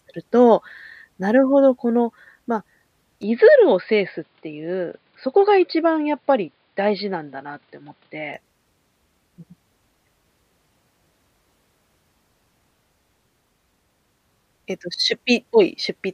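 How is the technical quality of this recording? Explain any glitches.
The recording has one clear fault, in the speech between 3.23 and 8.34 s. There, the input has likely switched to a poorer device, then back again. Nothing above 5 kHz gets through, so the speech turns dull and boxy, and a faint new background noise, roughly 45 dB below the voice, comes in with it. The level stays about the same and there's no gap at either switch. The change of noise floor and tone, starting and stopping with the band limit, is what sets this apart from a simple low-pass filter or a codec narrowing its bandwidth.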